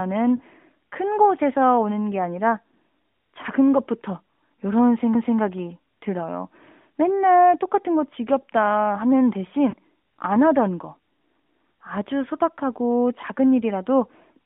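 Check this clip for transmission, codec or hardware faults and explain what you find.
Two short dropouts from lost AMR speech frames occur in the narrowband mobile audio, whose band stops near 3.6 kHz.

Lost AMR speech frames, 0.36–0.42 s and 9.71–9.74 s: radio errors corrupted frames, so the decoder replayed the last good pitch and vocal-tract settings at falling gain. The first gap, about 40 ms, fits two lost frames and is heard as a drawn-out dip. The second, shorter gap fits one frame and is a brief dip or warble.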